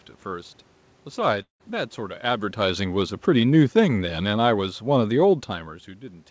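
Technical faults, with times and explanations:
1.42–1.62 s, long network dropout. Audio stops arriving, most likely lost in the network. The receiver stretches the last sound into a fading buzz, which then sinks to near silence. The sound resumes with about 0.18 s of it missing for good.
2.24–5.46 s, automatic gain falling. The gain control judges the input too loud, or its background too strong, and lowers its level gradually, by about 6 dB. The sound and its room background sink together. That shared, steady fade separates it from the talker's movement near 2.5 s.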